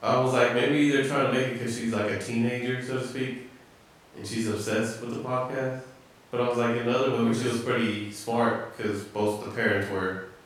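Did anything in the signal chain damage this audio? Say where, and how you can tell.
No, no stage of the signal chain damaged this speech.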